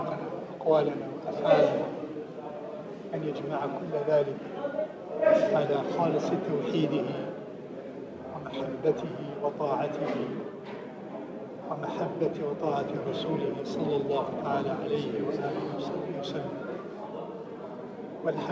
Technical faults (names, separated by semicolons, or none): none